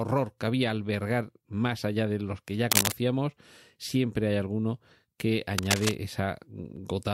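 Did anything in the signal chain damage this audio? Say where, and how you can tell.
Yes, in the analogue wiring: cable scratch noise appears twice, from 2.71 to 2.92 s just after "de los que ya", and from 5.58 to 5.95 s after "siempre hay alguno que". It sounds like gritty rustling laid over the speech, about 5 dB above it the first time and roughly level with it the second. A worn connector or lead being moved is the likely cause, with its contact resistance flickering rapidly. On a spectrogram each burst is a ragged, broadband smear. The waveform shows dense, irregular spikes.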